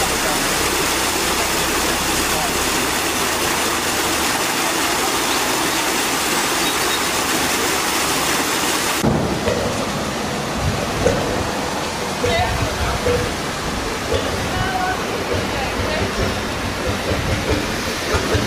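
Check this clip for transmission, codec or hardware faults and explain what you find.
No transmission, codec or hardware faults can be heard anywhere in the clip. There is nothing to report that would point to a problem in the signal chain.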